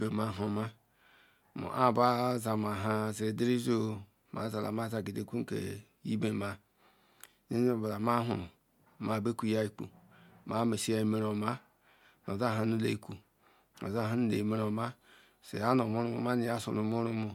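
Nothing in the recording stood out as a technical fault when listened to closely.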